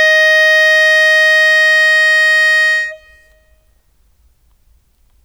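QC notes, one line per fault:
No fault was heard in this music clip. There is nothing to log against any point in it.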